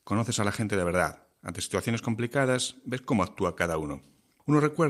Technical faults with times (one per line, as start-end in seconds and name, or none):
0.00-4.90 clock drift between sender and receiver
0.15-4.47 repeated timing corrections